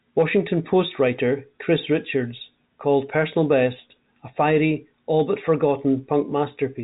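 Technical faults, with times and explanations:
No technical faults can be heard in the speech.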